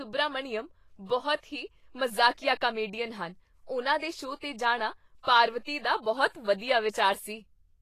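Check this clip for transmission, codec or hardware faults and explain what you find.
The speech has been through lossy compression throughout, most likely Vorbis compression at a low setting; the damage is plainly audible and fits a bitrate of around 32 kbps. At that rate the encoder spends few bits on the treble, so it cuts everything above about 14.2 kHz and quantises the remaining high detail so coarsely that it turns into noise of similar energy. The result sounds hissy and grainy, with roughened tone and softened consonant attacks.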